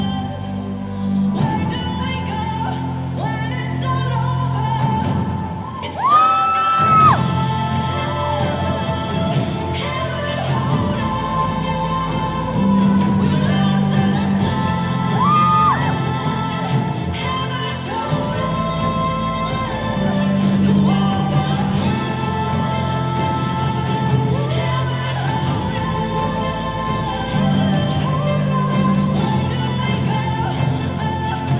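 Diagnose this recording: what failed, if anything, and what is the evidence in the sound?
No fault is audible here.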